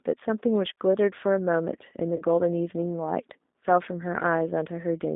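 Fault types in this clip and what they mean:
G.729 codec: a low-rate 8 kbit/s VoIP codec rebuilding speech from a model, so the line sits around 200 Hz to 3.7 kHz and sounds plainly rough and synthetic.
VoIP packet loss concealed by the speech codec: about 30 ms went missing near 2.16 s, and the decoder filled it by stretching the last sound into a fading buzzy tone or coloured noise, staying weak until 2.23 s.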